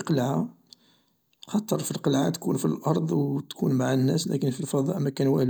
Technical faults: none

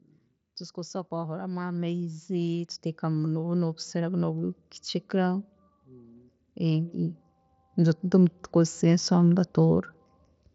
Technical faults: automatic gain rising

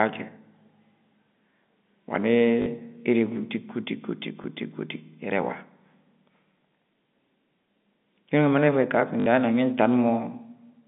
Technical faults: packet loss with last packet repeated

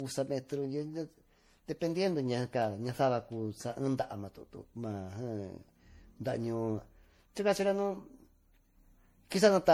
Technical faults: generation loss

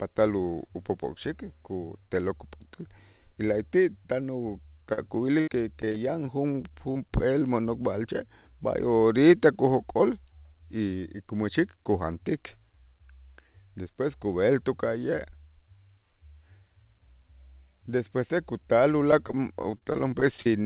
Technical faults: short concealed packet loss; repeated packet loss (robotic sound)

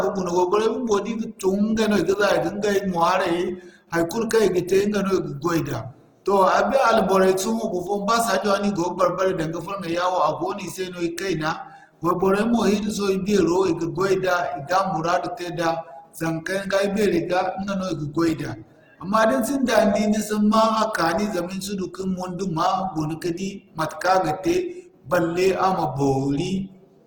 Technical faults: Opus compression

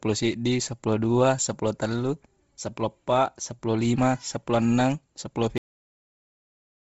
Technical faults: Bluetooth LC3 compression; cut-off end

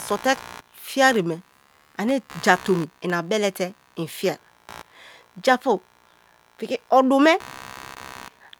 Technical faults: computer activity noise

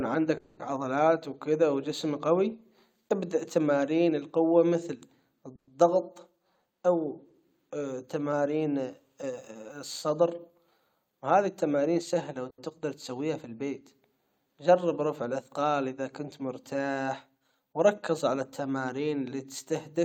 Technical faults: call audio freeze; jitter buffer speed-up; short stall from a late packet

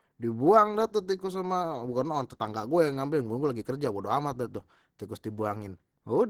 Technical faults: Opus compression

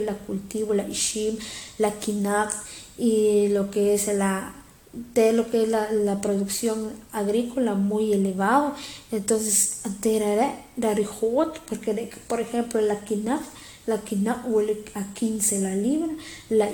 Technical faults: generation loss

